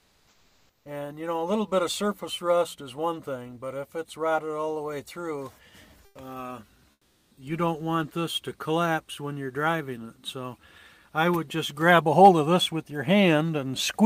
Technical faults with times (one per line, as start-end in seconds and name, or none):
0.00-0.85 comfort noise in place of the background
6.05-6.15 comfort noise in place of the background
6.91-7.37 comfort noise in place of the background
7.29-7.37 onset clipped by the voice detector